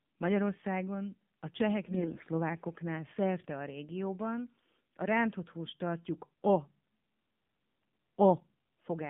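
From start to finish the speech sounds thin, buzzy and somewhat synthetic, confined to a telephone band of roughly 150 Hz to 3.6 kHz. This is the AMR narrowband mobile codec: a vocal-tract model driven by sparse pulses, and the plainly audible damage fits a low mode around 7.4 kbps.

From 1.86 to 2.27 s the voice turns hoarse, scratchy and gargly while keeping roughly its pitch and loudness. These are AMR bit errors. Around one bit in five of the weakly protected data arrived flipped, misplacing excitation pulses and skewing the finer pitch, gain and spectral values.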